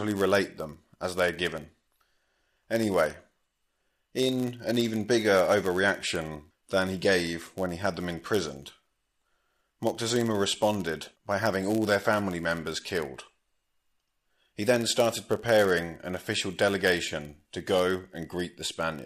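Throughout the speech, a block size mismatch (padded) zero-fills each block's short tail, causing a 99.6 Hz buzz and playback at 0.996 speed, near normal pitch.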